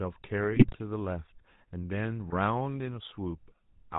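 A buzzy, gravelly roughness and a dull top with nothing above 4 kHz run through this speech recording, the signature of GSM full-rate codec coding at a rate that fits its 13 kbps. Pulse-driven vocal-tract modelling discards most fine excitation detail. Squawks and gargling bursts at 0.51–0.77 s and 2.28–2.33 s are GSM bit errors: corrupted filter, pitch or gain values distort the decoded frames.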